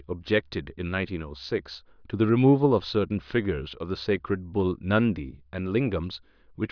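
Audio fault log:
Nothing stood out on listening to this speech recording.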